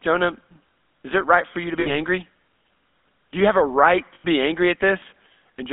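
From start to finish the speech has the buzzy, gravelly roughness of the GSM full-rate codec, which fits a 13 kbps coder that rebuilds the vocal tract from coarse settings and drives it with sparse, regularly spaced pulses instead of the real excitation. The band is held to roughly 200 Hz to 3.7 kHz, so a spectrogram shows a hard ceiling near 3.7 kHz with empty space above it, and the harmonics within the band look smeared and grainy.

At 1.8 s, right after "right for you to", lost GSM frames break in until 1.96 s. The decoder repeats the last good frame, producing a brief rough, metallic ring instead of fresh speech. The gap fits about 60 ms of missing audio. On a spectrogram it appears as a frozen horizontal smear. The waveform shows a repeating pattern.

A second, longer dropout of lost GSM frames runs from 4.14 to 4.25 s, between "you have a right" and "be angry". Here about 100 ms of audio is replaced by the same held metallic tone. 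The spectrogram again shows frozen, repeated spectral bands. The waveform shows a periodic stretch before normal speech resumes.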